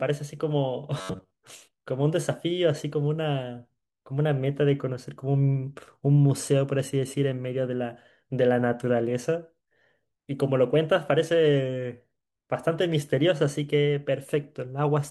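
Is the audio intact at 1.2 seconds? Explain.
No. At 1.2 s the speech falls inside a stretch of robotic sound from repeated short buffers, running from 0.99 to 1.31 s. The voice collapses into a rigid, metallic buzz at about 94 Hz that only loosely tracks the speech. The likely cause is audio arriving too slowly, so the playback loops a segment of roughly 10.7 ms, one cycle of that buzz, in place of most of the real signal, which is lost.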